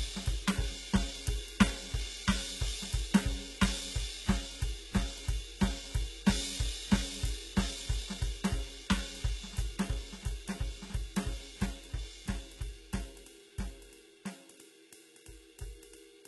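Music with heavy HE-AAC compression throughout, likely from a very low bitrate near 16 kbps. The treble is rebuilt from copied lower bands, sounding gritty and metallic, and stops at 11.8 kHz.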